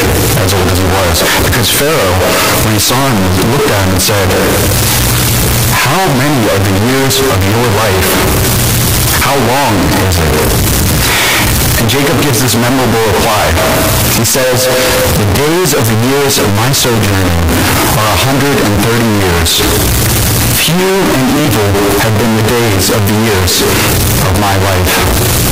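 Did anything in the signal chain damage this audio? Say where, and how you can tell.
Yes, at the sample-format stage. Throughout, the speech is a near-square, high-level roar, with background noise as loud as the talker, yet pitch stays followable. It's a float read as integer, likely 32-bit float samples read as 32-bit integers, with sign and exponent bits setting the level.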